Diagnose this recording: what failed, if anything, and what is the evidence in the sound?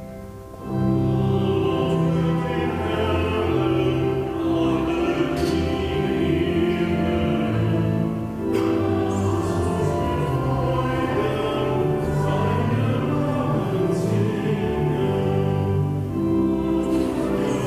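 The failure is video or display buzz in the analogue wiring. A buzz at 60 Hz runs through the whole recording, with hash above it. It sits roughly 30 dB below the signal. A screen or video cable is coupling its field-rate pulses into the audio path.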